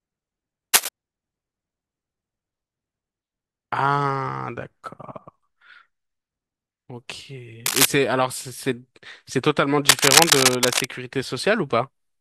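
Cable scratch noise interrupts this speech clip at 0.73–0.89 s, 7.66–7.86 s and 9.88–10.85 s: rough, rustling bursts sitting slightly above the voice, most likely from a worn cable or connector being moved so its contact resistance jitters rapidly.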